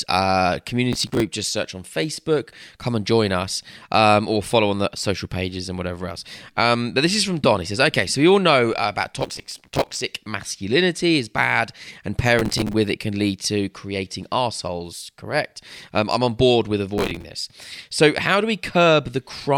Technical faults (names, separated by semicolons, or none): processor overload crackle